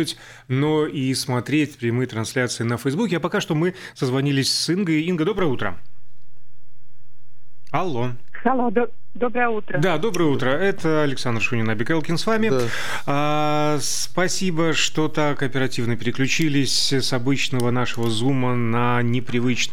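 At 5.39 s the zero line of the waveform jumps to a fixed offset of about -22 dBFS and stays there to the end, a DC step like an input with a standing offset being switched in. It is heard as a single low thump or click, after which the sound continues unchanged. On a waveform the whole trace sits displaced from centre after that point. A spectrogram shows a brief vertical low-frequency smear at 5.39 s.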